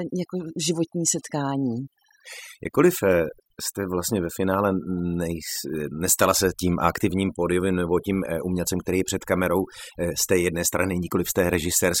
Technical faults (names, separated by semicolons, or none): overdone noise removal; clock slip clicks